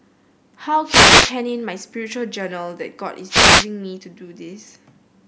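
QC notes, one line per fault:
0.84–1.36 s and 3.28–3.67 s, wireless microphone noise hit: two short bursts of static swishing over the speech, about half a second and 0.4 s long, as the analogue FM radio link fades and receiver hiss rises. Unlike a digital dropout, the sound is buried in noise rather than cut to silence.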